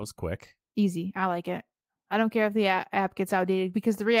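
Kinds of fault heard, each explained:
No audible faults are present in this recording.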